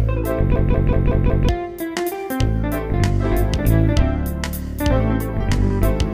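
From 0.56 to 1.49 s a system hang loop repeats one 186 ms slice about five times, a machine-gun stutter at about 5.4 per second. The hardware kept replaying its ring buffer, which fits an 8192-sample buffer, while the system froze, losing about a second of audio.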